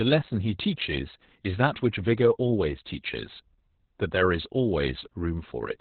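From start to finish the speech carries Opus voice compression, squeezed hard. Nothing survives above about 4.2 kHz, so it's narrowband SILK coding, and the coarse excitation leaves the speech muffled, hoarse and a bit robotic, which fits a bitrate around 8 kbps.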